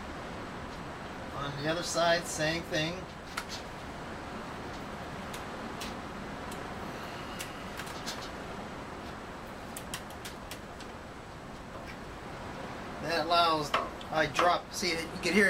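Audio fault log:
Nothing here catches the ear as a fault, so there's nothing to log for this one.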